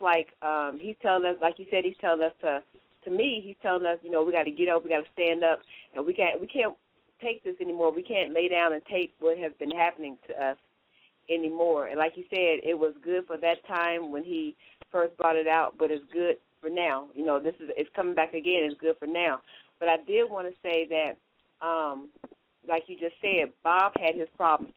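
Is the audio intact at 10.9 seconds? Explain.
No. Throughout the clip, including 10.9 s, there is imaging from linear upsampling. The rate was raised from 24 kHz to 44.1 kHz with straight-line interpolation, which dulls the top of the band and leaves a faint mirrored image from 12 kHz to 24 kHz, roughly 45 dB down. It adds a light metallic shimmer to bright sounds.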